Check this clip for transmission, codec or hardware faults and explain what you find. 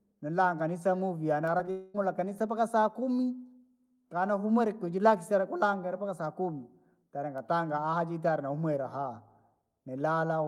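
Yes, there's a cluster of transmission trouble right near the start, all within about four tenths of a second.

Short concealed packet loss hits twice, at 1.57 to 1.61 s and 1.65 to 1.69 s: roughly 20 ms each goes missing, and the decoder papers over it, leaving a quick smear or wobble.

Then from 1.71 to 1.96 s there's a stretch that sounds like a long network dropout, likely a burst of lost packets. The receiver stretches the last sound out as a fading buzz or hiss for nearly all of that quarter second rather than going silent, and the audio picks up again with that part gone.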